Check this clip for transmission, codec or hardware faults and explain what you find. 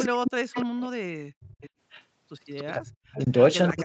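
Two faults show up in this speech clip, both typical of a loudspeaker-based call: echo leak and speech suppressed in double talk.

Echo leak occurs from 0.00 to 0.81 s, from 1.60 to 2.03 s, and from 2.57 s to the end. A second, fainter copy of the speech trails the original by about 295 ms. It is strongest at the start, roughly 10 dB below the speech, drops to about 25 dB down in the middle stretch, and sits around 20 dB down at the end. The likely cause is a far end playing the call through a loudspeaker whose echo canceller let part of the microphone pickup through, so that delayed copy came back down the line.

Speech suppressed in double talk runs from 0.08 to 1.54 s and again from 2.76 s to the end. The talker's level sinks sharply, by up to around 40 dB at its deepest, so stretches of speech dip, thin out or break into fragments, overlapping the echo periods. This is likely an echo canceller facing simultaneous talk that could not tell the local talker from loudspeaker echo and pulled everything down. 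The Opus call path's 8 kHz bandwidth limit can also be heard as a dull top end.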